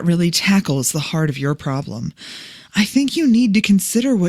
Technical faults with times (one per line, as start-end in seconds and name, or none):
none